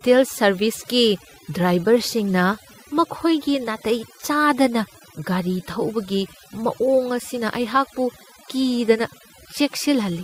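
Overdone noise removal runs through the whole speech clip: an over-aggressive suppressor switches off bands near its noise estimate, leaving near-silent gaps with twinkling specks.

Clock drift between sender and receiver is also present throughout, with the sender's clock running roughly five percent fast, so the receiver's jitter buffer keeps overfilling.

Repeated timing corrections follow from 0.07 s to 10.2 s, as the receiver trims short pieces to keep pace with 105% playback, heard, if at all, as uneven small hiccups and unsteady tempo.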